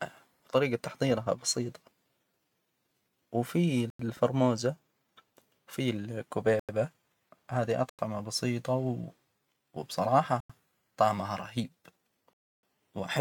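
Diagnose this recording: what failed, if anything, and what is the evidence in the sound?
Buffer stage failed: blocks of digital silence at 3.90, 6.60, 7.90 (before "بسيطة و") and 10.40 s (before "طعمها رهيب"), each 93 ms, fitting 4096-sample buffer underruns. A 300 ms hole follows at 12.33 s.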